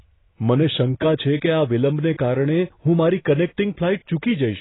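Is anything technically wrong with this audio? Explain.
Yes, the whole clip has heavy AAC compression damage, likely from a very low-bitrate AAC-LC encode; nothing survives above 3.9 kHz. The speech sounds dull and smeared, with a warbly, fizzy edge on sibilants, consistent with a bitrate around 16 kbps.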